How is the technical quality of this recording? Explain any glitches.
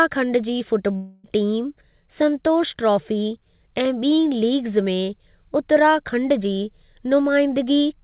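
The recording has one clear glitch, heard over narrowband call audio with nothing above 4 kHz.

Long network dropout, 0.96 to 1.26 s: the speech stops and a fading buzz fills roughly the whole 0.3 s gap, with no true silence. This is likely a stretch of lost packets, with the receiver extending the last sound until the speech resumes, minus the missing portion.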